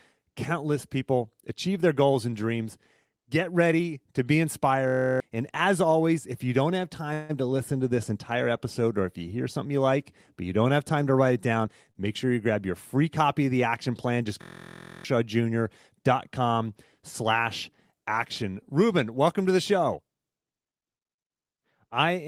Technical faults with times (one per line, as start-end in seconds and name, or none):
4.88-5.20 system hang loop
7.13-7.31 call audio freeze
11.65-11.90 jitter buffer speed-up
11.91-11.97 short stall from a late packet
14.42-15.05 system hang loop
19.97-20.84 jitter buffer speed-up